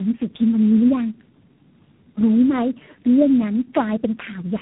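Throughout the speech, tandem speech coding roughens and muffles the sound with a warbly, smeared texture, which fits three low-rate speech coders in a row, each re-coding the last one's damage. A spectrogram shows nothing above 3.8 kHz and blurred, fragmented harmonics.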